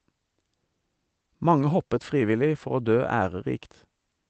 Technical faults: none

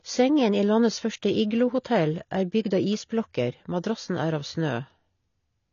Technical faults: AAC compression

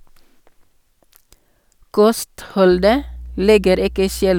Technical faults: mains hum

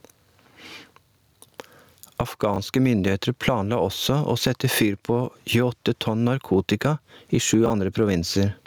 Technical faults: gain pumping; chunks out of order

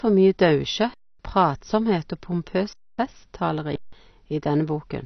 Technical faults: AAC compression; underrun with held sample

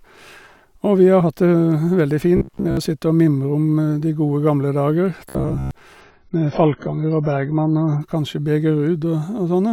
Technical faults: robotic sound from repeated short buffers; adaptive stream at a lower bitrate

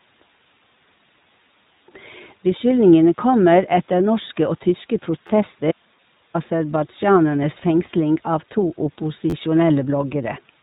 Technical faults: iLBC codec; repeated buffer; audio dropout to a faint residue

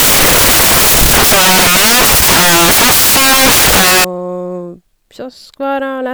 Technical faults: samples built from the wrong bytes

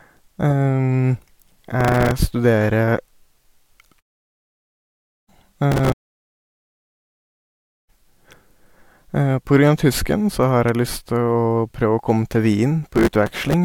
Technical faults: processor overload crackle

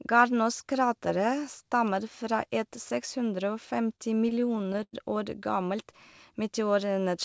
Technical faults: repeated stalls (stutter)

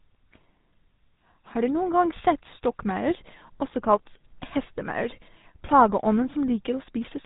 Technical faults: GSM full-rate codec

